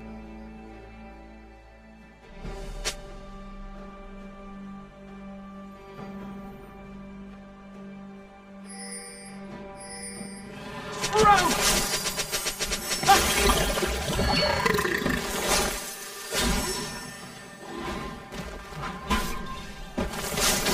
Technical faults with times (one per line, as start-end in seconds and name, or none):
0.00-20.74 channel delay (comb filtering)